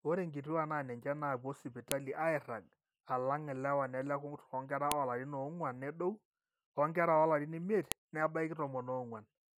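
Speech with a file header played as audio. Sharp, loud clicks land at 1.92 s, 4.92 s and 7.92 s, exactly 3 s apart. Each marks a joined piece whose header bytes were kept and played back as samples.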